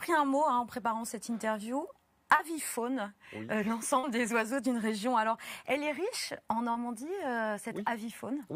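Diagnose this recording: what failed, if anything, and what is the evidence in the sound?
Network stage: short concealed packet loss at 2.35–2.42 s, 3.99–4.06 s and 6.71–6.78 s. Each time about 40 ms never arrived, and the receiver extrapolated the preceding sound before crossfading back. Each gap sounds like a brief smear or wobble.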